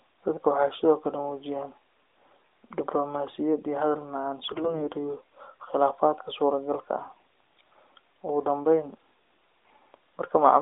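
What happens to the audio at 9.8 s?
AMR bit errors corrupt the speech from 9.66 to 9.76 s: flipped low-priority bits misplace excitation pulses and skew fine parameters, leaving a brief hoarse, gargly scratchiness.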